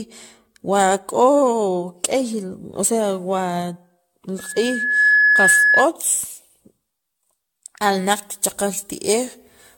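Speech throughout has a swirly, hollow, smeared quality, attacks are blurred, and nothing is present above 17 kHz. That is more damage than a single 96 kbit/s AAC encode would leave, so the likely cause is generation loss from around ten successive encodes, each adding fresh quantisation noise on a shifted frame grid. From 4.38 s to 5.89 s a loudspeaker feedback squeal appears: a single 1.7 kHz tone swells over roughly three-quarters of a second to sit about 5 dB above the speech. Its self-building, fixed-pitch growth marks it as a feedback loop rather than an added test tone or hum. From 7.81 s to the end, pre-emphasis is left on. The treble rises about 10 dB at 10 kHz relative to 1 kHz, which fits an uncorrected FM 50 µs curve, making the speech thin and sibilant. Unlike a general EQ boost, the lift climbs steadily with frequency along that fixed shape.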